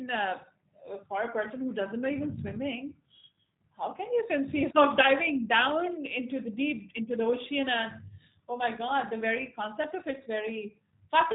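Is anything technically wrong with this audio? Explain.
Yes. Throughout the clip, G.729 codec damage is plainly audible: speech rebuilt from a vocal tract model and pulse excitation sounds rough and synthetic, consistent with 8 kbit/s, with a spectrogram showing nothing above 4 kHz.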